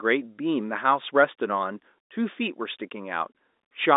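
No faults can be heard in this telephone-band speech.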